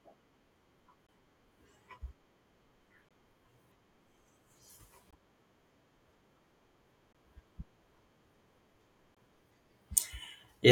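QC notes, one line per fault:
1.07–1.09, 3.09–3.11, 5.11–5.13, 7.13–7.15, 9.15–9.17 s, gap between chunks: hard-edged 20 ms dropouts in the speech every two seconds, from silence inserted between 2-second chunks.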